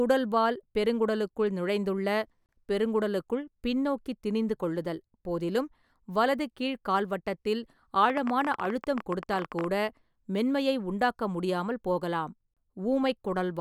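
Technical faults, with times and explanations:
8.10–9.65 s, train of clicks: an uneven ticking of about 15.5 clicks per second, some thirty in all, peaking around 10 dB above the speech, likely from electrical interference or a faulty connection or power supply. It shows as thin, irregularly spaced vertical broadband lines on a spectrogram and as sharp spikes on the waveform.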